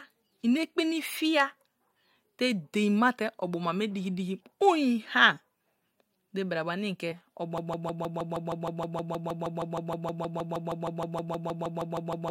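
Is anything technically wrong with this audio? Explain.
Yes, two faults. At 7.11 s there's a compressed frames skipped glitch: about one frame, roughly 20 ms, fitting a 23 ms codec frame, goes missing, so the audio jumps ahead. From 7.58 s to the end it turns into a broken-record loop, a 157 ms fragment repeating about 30 times back to back. That's likely a stalled player or stream resending its last buffer, and the real audio is lost.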